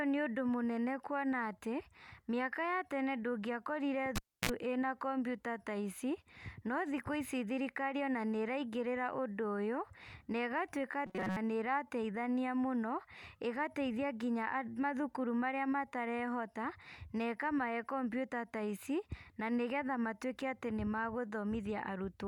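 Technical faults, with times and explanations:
4.16–4.50 s, cable pulled and plugged in: a pop as the signal drops out for about 290 ms, then a 45 ms burst of 60 Hz mains buzz while only the plug tip makes contact, and a second pop as the connection seats and sound returns.
11.06–11.37 s, robotic sound from repeated short buffers: the speech turns into a rigid metallic buzz at 188 Hz just before "nĩrateithania mũno ĩgateithia". Likely cause is a buffer of about 5.3 ms being replayed repeatedly while most of the real audio is skipped.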